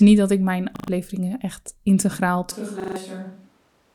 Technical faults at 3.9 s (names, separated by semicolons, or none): switch to a distant microphone